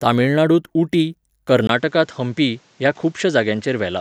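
At 1.67 s the speech breaks for about 20 ms, then continues duller, with nothing above 8.3 kHz. The level is unchanged, but a faint new noise sits some 35 dB down. That fresh noise floor, unlike a simple filter, likely points to an input switched to a poorer device.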